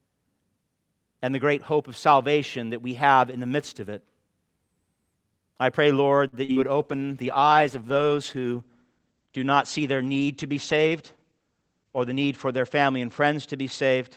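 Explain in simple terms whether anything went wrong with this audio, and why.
Several things went wrong, all from the network carrying the call.

At 6.27 s there is a short stall from a late packet. A piece of audio arrived late, so the receiver held the last sound for about 52 ms until it came in.

Right after that, at 6.45 s and 6.52 s, there are two cases of short concealed packet loss. About 40 ms went missing each time, and the receiver patched the gaps with guessed sound, which gives brief smears.

From 6.80 s to the end there is a call bitrate drop. The connection weakened, so the audio was squeezed much harder and everything above 8 kHz was cut, leaving it rough and muffled.

Between 11.31 and 11.63 s there is a jitter buffer speed-up. To catch up on built-up delay, the receiver trimmed about a twentieth of a second, so the sound plays 12% faster at unchanged pitch.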